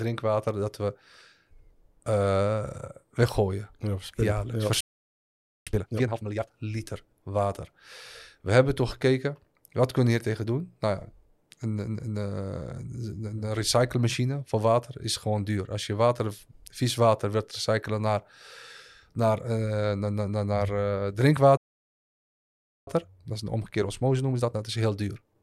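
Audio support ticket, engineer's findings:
Playback stall, 4.81 s and 21.57 s: output likely starved of data or player thread blocked. Speech cuts out mid-flow, silent about 0.86 s, then about 1.3 s, before resuming.

Time-compressed catch-up after each stall: player drops backlog by splicing and cross-fading short segments. 5.67–6.51 s runs 2x, clearly hurried; 22.87 s to end runs 1.1x, slightly rushed. Pitch unchanged.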